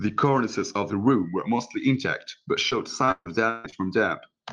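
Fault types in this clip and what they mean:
Repeated packet loss (robotic sound): From 2.69 to 3.77 s the speech drops out five times, the longest gap 143 ms. Each hole is bridged by stretching the last sound forward. A third of that stretch is patched, so it sounds choppy, with pieces missing.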